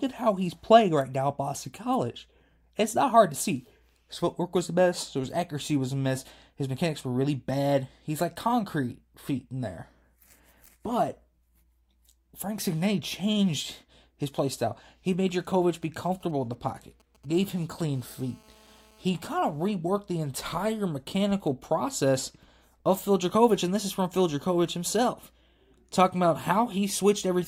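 From 15.74 to 17.95 s come GSM signalling bursts: a nearby 2G phone emits short clusters of radio bursts that the audio circuit rectifies, giving a galloping dit-dit-dit of brief 217 Hz buzzes sitting roughly 30 dB under the speech. Unlike the buzz that follows, it stutters in irregular groups rather than holding steady.

From 17.96 to 19.03 s, just before "kind of reworked the", it becomes GSM phone buzz. The handset is now transmitting in bursts 217 times a second in call mode, and the rectified 217 Hz burst train produces an unbroken, raspy, harmonic-rich drone at about -32 dB relative to the speech, with no tick pattern.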